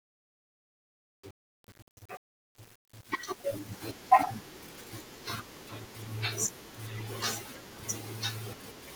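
From the start to 3.87 s, the fade on the speech shows truncation distortion. The gain stage over this stretch keeps only about 8 bits and adds no dither, so the quietest samples snap to a few coarse steps. The whole span sounds gritty rather than clean. On a waveform the low-level portion looks like stair-stepped blocks; a spectrogram shows broadband hash and harmonic spray instead of a clean noise floor.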